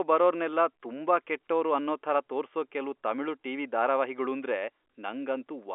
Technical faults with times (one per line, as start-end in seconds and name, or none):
none